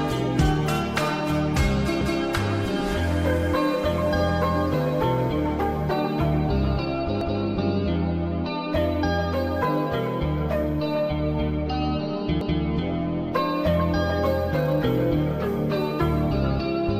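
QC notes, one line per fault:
2.01 s, 7.21 s, 12.41 s: overlapping chunks. At each join, 200 ms of sound plays twice, heard as a stutter. Each 5-second chunk begins before the previous one ends, so the overlap is replayed. The repeats come every 5.2 s.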